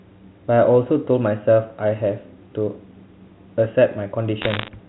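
Bit errors on a digital phone line crackle through this speech recording from 4.42 to 4.68 s, near the very end. Over that quarter second, scattered bits in the telephone stream arrive flipped, around one in a hundred, and each flip corrupts a single sample. Where a flip lands on the sign bit of a loud sample or on a high-order bit, that sample leaps far from its true value and produces a sharp tick. Together these ticks form a rough crackle laid over the speech. The line itself is G.711 telephone coding, so nothing above 4 kHz comes through.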